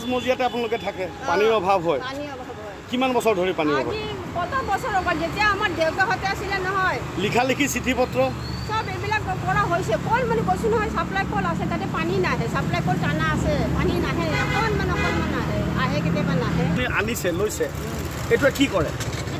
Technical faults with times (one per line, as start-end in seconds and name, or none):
none